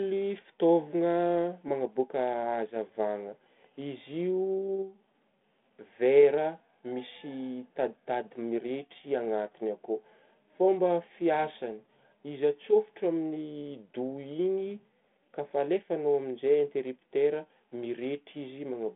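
The speech shows no technical faults, carried over a G.726 ADPCM telephone path at 32 kbit/s whose band runs from about 150 Hz to 3.5 kHz and whose coding leaves only light damage.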